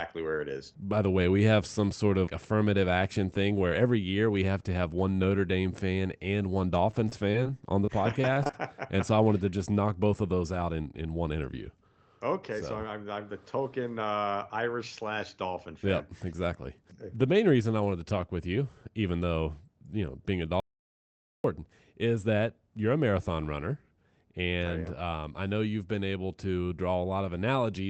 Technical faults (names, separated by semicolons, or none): repeated packet loss (robotic sound); audio dropout to silence